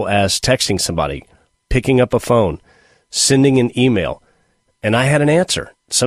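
From 0.47 s to the end, the speech carries a block size mismatch (truncated): the tail of each written block is discarded before the next stage reads it. This produces a steady buzz at about 46.9 Hz, which fits 1024-sample blocks, with playback speed at 1.0x.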